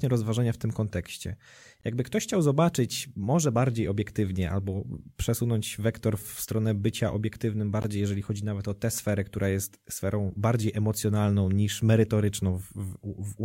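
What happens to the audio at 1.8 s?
A gap between stream segments interrupts the speech from 1.81 to 1.84 s. The timestamps of two consecutive segments, which fits segments of 6.0 s, leave a hole of about 20 ms between them, and the player fills that hole with silence. The result is a brief dropout with abrupt, hard edges that cuts straight into the speech. Nothing is actually missing: the silence is inserted, so the speech after it simply arrives about 20 ms later.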